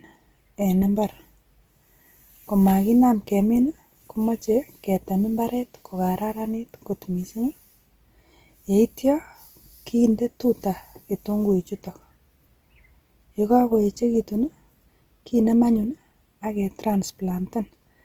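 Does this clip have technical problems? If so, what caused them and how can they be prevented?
Yes. Throughout the speech there is plainly audible Opus compression, likely the cause of the rough, grainy texture on voiced sounds. The encoder is working in its music (CELT) mode at a rate that points to about 24 kbps, too little for fullband audio. Bands short of bits are filled by folding lower content or with noise. On a spectrogram the energy reaches about 20.1 kHz with few gaps, but the harmonic lines break up into speckled noise. Encoding at a higher bitrate would prevent it.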